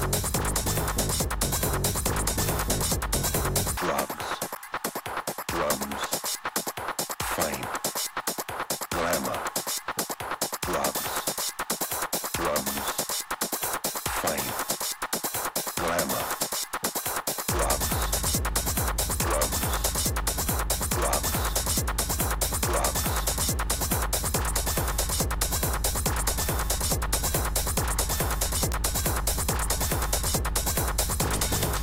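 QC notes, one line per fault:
9.11 s and 28.72 s: electrical switching spike. Each time, a brief arc, likely from a nearby switch, motor or static discharge, was coupled into the audio line. It is heard as a sharp snap over the sound, peaking around -15 dBFS and then louder, around -10 dBFS.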